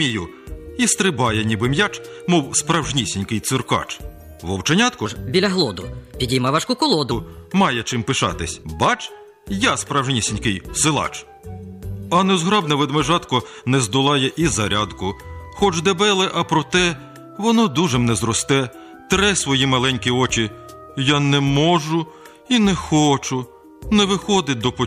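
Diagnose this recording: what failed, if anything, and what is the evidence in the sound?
A section at the wrong speed runs from 5.06 to 7.11 s. The sound there plays 1.2 times faster and rises about three semitones, with tempo and pitch shifting together and snapping back at both edges. That coupling rules out a pitch-shift effect, which leaves timing intact, and nothing is dropped or repeated, as with buffer faults. The likely stage is playback or editing, where that stretch was read against the wrong sample clock.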